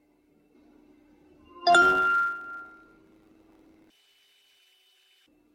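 From 1.81 to 4.59 s a block size mismatch (truncated) sets in: each block is written longer than the next stage reads, which fits 512-sample blocks, and their tails are discarded. A 100 Hz buzz appears, the sound runs about 1.07 times fast at near-normal pitch, and the waveform and spectrogram show regular discontinuities every 10 ms.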